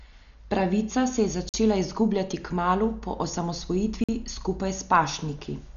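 Speech, and it's had a rough time. The whole thing sounds dull and band-limited, with nothing above about 7 kHz, and there's a grainy, fluttering noise clinging to the voiced sounds. That's heavy damage, likely from Dolby Digital compression at a low bitrate, something around 48 kbps. At that rate the encoder cuts the top of the band and leaves plenty of frequency lines with no real bits, so the decoder fills them with dither noise. That's the roughness you hear. On top of that there are two gaps between chunks: holes of about 48 ms at 1.49 s and again at 4.04 s. They're 2.5 s apart, which points to audio delivered in 2.5-second chunks with silence inserted at each join. That silence could come from codec padding or from a player starting each chunk a little late. Nothing gets dropped, but the flow breaks at both joins.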